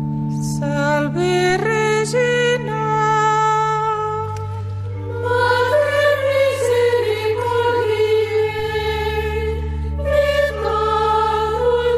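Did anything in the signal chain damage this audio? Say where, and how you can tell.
Yes. Two low thumps land at 1.50 s and 8.59 s, each a click with a brief low-frequency push behind it while the sound carries on untouched. These are DC steps at the converter stage: the waveform's zero line suddenly shifts by about -26 dBFS, as when the converter recalibrates its offset, and a 5 Hz high-pass then pulls the offset back toward zero, leaving only the thump from the sudden jump.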